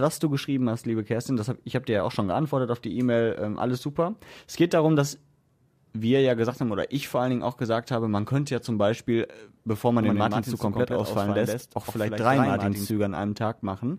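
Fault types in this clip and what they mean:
Doubled audio track: 10.0–12.9 s, after "bevor man", a slightly quieter copy starts abruptly and trails about 0.1 s behind, likely from a slower capture path.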